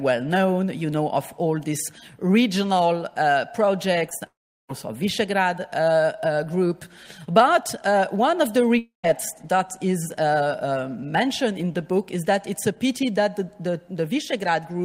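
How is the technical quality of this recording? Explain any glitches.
The recording has clear transmission damage, clustered around 4 s with a second gap near 9 s.

Short concealed packet loss occurs at 4.09 to 4.13 s and 4.19 to 4.23 s, each covering about 20 ms of missing audio. The receiver extended the preceding sound and blended back, producing a brief smear or wobble. On a spectrogram these show as thin vertical smudges where harmonics blur.

Directly after, from 4.27 to 4.70 s, the sound continues briefly as a fading buzz or hiss and then falls to silence for about 0.36 s before resuming. The same happens at 8.78 to 9.05 s, with roughly 0.14 s of silence. Both are likely long network dropouts, with audio lost rather than delayed. A waveform shows a decaying tail, then a flat gap.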